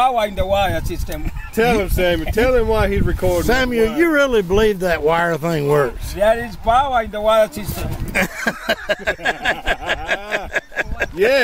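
Right through the clip there's clock drift between sender and receiver. The sending side's clock runs roughly 1.5 percent slow compared with the receiver's, so audio arrives a little slower than it gets played out. The jitter buffer keeps draining, and the receiver has to pad things out to keep up. You hear the result as small timing hiccups at uneven spacing, never as a steady pitch or speed change.

From about 0.09 s to 11.31 s there are repeated timing corrections. The receiver keeps slipping in short repeated pieces, all in the same direction, which brings the playback to about 98 percent speed and stretches the stretch by roughly a fifth of a second overall. Each edit on its own is tiny, so it comes across as a slightly unsteady tempo with the occasional stutter at irregular intervals.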